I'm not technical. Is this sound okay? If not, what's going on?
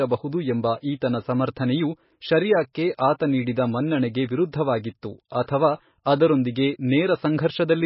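No. Throughout the speech, nothing is heard above 5.6 kHz, and the heavy damage leaves a watery, swirling quality on s sounds. That swirl, not just dullness, points to likely MP3 compression squeezed too hard, rather than a muffled microphone.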